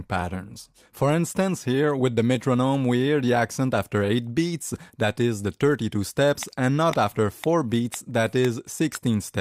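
No technical faults can be heard anywhere in the clip. Nothing in the sound points to a problem at any stage of the chain that carried it.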